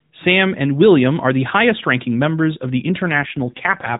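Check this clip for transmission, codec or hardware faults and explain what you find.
There is one fault: an AMR rate drop near the end of the speech, heard against the light coding of the AMR narrowband mobile codec that runs through the clip.

From about 3.12 s, right after "members of the", to the end, the speech turns buzzier and more synthetic. This fits the network pushing the codec from its 12.2 kbps mode down to 4.75 kbps, so fewer pulses per subframe model the excitation. The waveform stays continuous. On a spectrogram the band still stops at 4 kHz, but the harmonics become smeared and grainy.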